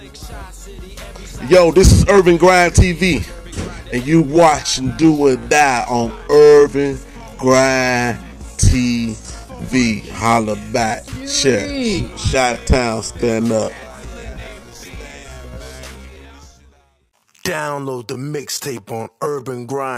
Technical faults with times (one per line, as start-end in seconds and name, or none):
4.00-19.98 time-stretched section